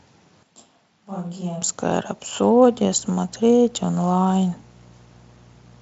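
A speech recording with two separate faults. From 0.43 s to 1.62 s the close microphone's signal likely dropped out and a more distant microphone took over, a switch to a distant microphone. The sound turns hollow and roomy at once, loses bass, falls by roughly 10 dB, and carries more room noise, sitting only some 35 dB under the speech. Both the change into this stretch and the return are abrupt. From 2.53 s to the end, mains buzz leaks into the chain, the kind of interference a dimmer, rectifier or unshielded cable lets in as sharp spikes twice per mains cycle. Here the mains frequency is 60 Hz, so harmonics of 60 Hz stack up into a steady, raspy buzz roughly 30 dB below the signal that runs under everything that follows. The Speex-coded audio reaches up to about 7.9 kHz, with little or no coding damage.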